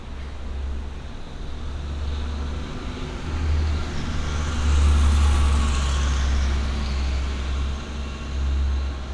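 No technical faults are audible anywhere in this audio.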